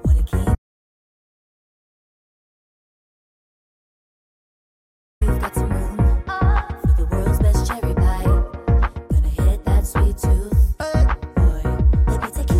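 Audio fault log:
0.55–5.21 s, audio dropout to silence: the input feeding the recorder was likely lost, through a disconnected device, a failed link or a mute, while writing carried on with silence. The sound cuts off abruptly just after the start and returns just as suddenly, leaving a gap of about 4.66 s of silence with no room tone or background underneath, so everything that happened during that stretch is missing.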